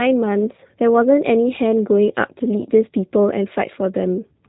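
From start to finish the speech sounds muffled and slightly rough, with a buzzy, synthetic edge and nothing above about 3.8 kHz, so sibilants lose their crispness. This is plainly audible G.729 codec damage, which fits an 8 kbit/s G.729A stream. Rather than sending the waveform, the codec rebuilds each 10 ms frame from a vocal tract filter, a pitch predictor and a few coded pulses. That approximation produces the grainy, artificial texture.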